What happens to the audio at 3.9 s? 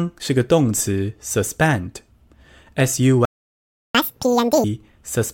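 At 3.95 s the speech resumes after a playback stall that began at 3.25 s, most likely because the player ran short of data or its thread was held up. For about 0.69 s the output is silent, which appears as a flat gap in the waveform and an empty band across the spectrogram.

From 3.95 to 4.64 s comes catch-up at higher speed: the player resamples its backlog to run at 2× speed, so the speech is sped up and raised by about ten semitones. On the spectrogram the harmonics sit visibly higher and more widely spaced, and the syllables in the waveform are squeezed tighter before returning to normal.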